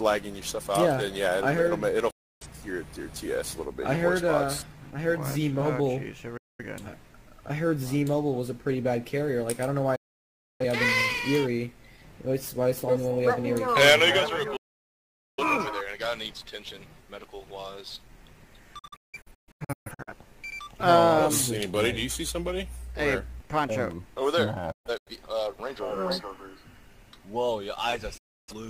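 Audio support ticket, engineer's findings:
Digital broadcast dropout: 8 ms fade-mutes at 2.10, 6.37, 9.96, 14.56, 18.79 (scattered holes over 1.3 s), 24.72 (scattered) and 28.17 s; receiver muting on corrupt or lost frames, programme content lost.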